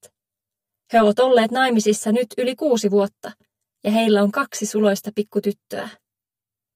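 Throughout the clip, one channel arrives roughly 10 ms behind the other, and when the two are summed to mono the shared material cancels at evenly spaced frequencies. This channel delay produces comb filtering, with the first notch somewhere around 50 Hz and further notches repeating about every 100 Hz above it. The fixed pattern of gaps leaves the whole sound hollow and phasey, with a slightly tubular colour that never shifts.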